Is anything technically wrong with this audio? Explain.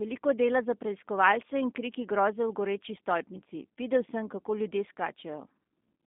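Yes, the whole clip has been through a G.729 codec. The speech is rebuilt from a vocal tract filter, a pitch predictor and a few pulses per frame, which fits an 8 kbit/s stream, so it comes out plainly rough and synthetic, squeezed into roughly 200 Hz to 3.6 kHz with nothing above 3.7 kHz.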